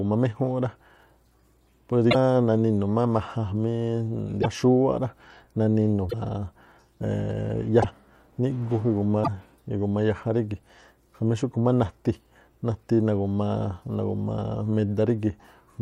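A broken MP3 bit reservoir is the likely cause of five short disturbances in this speech, at 2.10–2.15 s, 4.41–4.46 s, 6.09–6.14 s, 7.81–7.85 s and 9.23–9.28 s. Each lasts about 35 to 55 ms, roughly two frames at the 24 ms frame length the timing suggests. After frames go missing, the next one reaches back for borrowed data and decodes bytes from the wrong frame, so the speech skips forward through a brief chirp, burst of noise or short hole.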